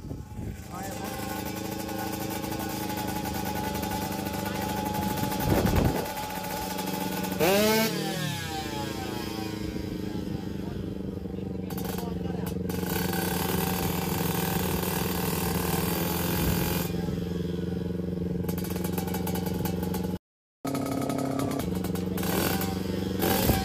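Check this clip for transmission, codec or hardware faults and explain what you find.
Two faults are audible, both near the end of the clip.

The first is a playback stall at 20.17 s. The sound cuts out abruptly in mid-flow and stays silent for about 0.48 s, until 20.65 s. The player likely ran out of buffered data, or its playback thread was blocked, so nothing reached the output. When the sound returns, it resumes rather than simply continuing at normal pace.

The second fault is catch-up at higher speed, from 20.65 s to 21.60 s. The player pushes its backlog through at 1.5 times normal speed by resampling. Speed and pitch rise together, so the sound is hurried and lifted by roughly seven semitones. This makes up the time lost in the gap. After about one second, playback drops back to normal speed and pitch.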